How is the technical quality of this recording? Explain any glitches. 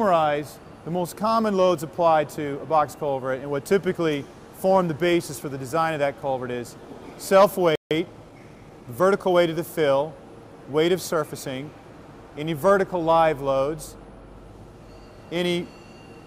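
Two linked glitches mar the playback near the middle of the clip.

At 7.75 s the audio drops out in a playback stall, going silent for about 0.15 s until 7.91 s. The likely cause is the player running short of buffered data or its output thread being held up, leaving a clear gap before the audio resumes.

From 7.91 to 9.45 s comes time-compressed catch-up: the player works off the backlog by removing and cross-fading small slices, running about 1.1 times faster. Pitch stays normal, but the passage sounds rushed.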